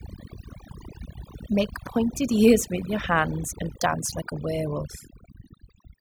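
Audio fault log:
throughout, overdone noise removal: the noise reduction is set far too hard, so individual frequency bands near the noise estimate get pulled down or shut off, taking the quieter parts of the speech with them. The background drops and breaks up into twinkling, warbling specks.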